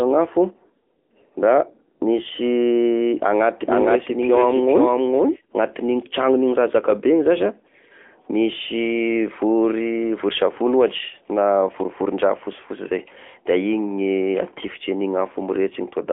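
AMR narrowband mobile codec damage runs throughout. The speech is squeezed into a telephone band of roughly 250 Hz to 3.5 kHz, nothing passes above 3.7 kHz, and the clearly buzzy, synthetic tone fits a mid-rate setting near 10.2 kbps.

A doubled audio track runs from 3.62 to 5.36 s. A second full-band copy, about as loud, trails roughly half a second behind with no room colour and cuts in and out abruptly. The cause is likely a second, slower capture path.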